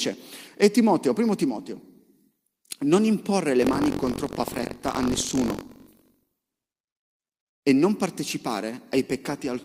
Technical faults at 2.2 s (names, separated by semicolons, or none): none